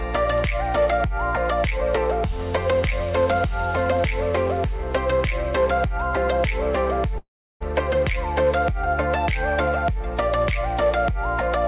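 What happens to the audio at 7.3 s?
At 7.3 s the audio is inside a call audio freeze running from 7.18 to 7.63 s, likely caused by delayed packets draining the jitter buffer. The receiver stretches the last sound into a brief fading buzz, then about 330 ms of silence, before the audio resumes exactly where it stopped, about 425 ms late with nothing lost. On a spectrogram, a smeared, static band below 4 kHz fades into an empty column; the waveform shows a decaying tail, then a flat line.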